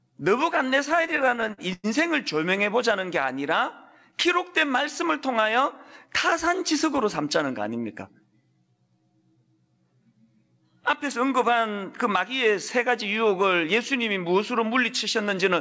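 From 0.92 to 1.86 s the audio stutters through repeated stalls: packets arrived late, the jitter buffer kept running dry, and fourteen short gaps, the longest about 101 ms, were filled by stretching the last sound. Unlike packet-loss dropouts, nothing is skipped; the passage drags, with the G.722 call path's 8 kHz ceiling unchanged throughout.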